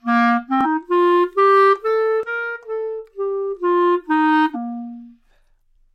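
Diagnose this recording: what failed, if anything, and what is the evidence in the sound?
Damaged data in the compressed stream, a codec-stage fault: short glitches at 0.61–0.67 s, 2.23–2.28 s, 4.51–4.57 s and 5.72 s. Corrupt bytes make the decoder misread frames and lose sync. On a spectrogram, each is a brief vertical disturbance; the waveform shows an abrupt discontinuity.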